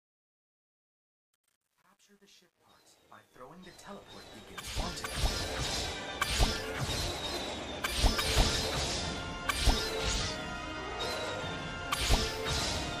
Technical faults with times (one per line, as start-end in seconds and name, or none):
0.00-5.78 truncation distortion on a fade